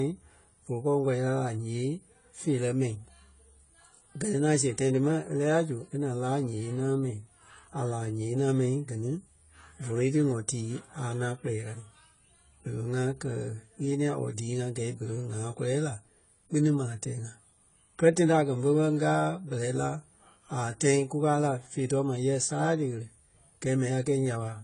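From start to finish the speech carries AAC compression damage, most likely from an AAC-LC encode at a low bitrate in the region of 24 kbps. Nothing survives above 10 kHz, so the top end sounds dull, and the quantisation leaves a smeared, warbly texture you can plainly hear.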